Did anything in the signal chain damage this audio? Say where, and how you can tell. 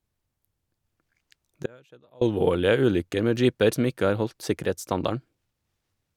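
Yes: a likely brief break in the analogue wiring caused an audio dropout to a faint residue from 1.66 to 2.21 s, leaving faint sound about 30 dB down before "alvorlige ulykker med jeeper".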